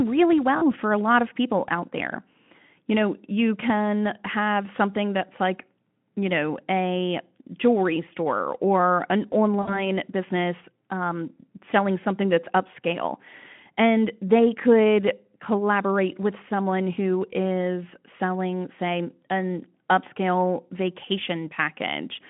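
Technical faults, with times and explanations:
0.57–0.69 s and 9.61–9.86 s, VoIP packet loss concealed by the speech codec: just before "for a lot of", and between "jewelry store or an" and "business um selling something", the sound smears into a buzzy tone or coloured noise that fades, then stays thin for a moment after. About 40 ms and 60 ms of audio went missing, which fits two and three lost 20 ms frames. The decoder filled each gap by repeating its last pitch and filter at falling gain. Because each frame builds on the one before, recovery drags past the gap, within a narrow telephone band of roughly 150 Hz to 3.4 kHz.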